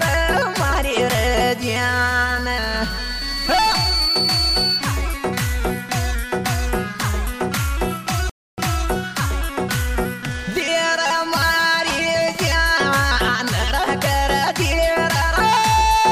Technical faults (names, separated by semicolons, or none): loudspeaker feedback squeal; playback stall